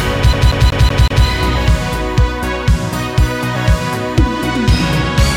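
From 0.33 to 1.26 s the audio shows a CD stuck on one turn: a 187 ms segment repeats five times with brief mutes, the laser jumping back at a scratch.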